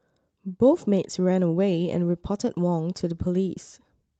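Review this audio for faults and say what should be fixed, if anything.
No faults were found in this speech clip, so nothing needs to be fixed.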